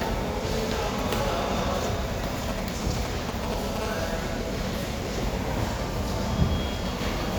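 From 2.49 to 3.78 s, a nearby 2G handset transmitting only short signalling groups, with its radio pulses rectified inside the audio circuit, produces GSM signalling bursts. These are a galloping dit-dit-dit of brief 217 Hz buzzes, almost as loud as the sound itself.

From 3.81 to 6.86 s, the phone moves into a call and transmits continuously at 217 bursts per second. The rectified pulses become a steady GSM phone buzz, a hard, raspy 217 Hz tone rich in harmonics, sitting about 18 dB below the sound.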